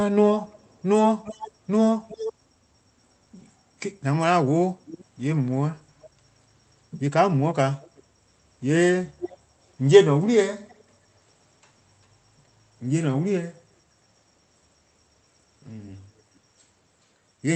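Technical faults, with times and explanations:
0.48–0.83, 1.24–1.52, 2.08–2.33, 4.85–5.05, 6.01–6.07, 7.81–8.03, 9.20–9.37 and 10.68–10.83 s: echo leak. A delayed copy of the speech returns in short scraps. Its lag grows from 345 to 391 ms. It sits about 10 to 35 dB below the speech. It is likely a far-end loudspeaker whose echo canceller let part of the sound back.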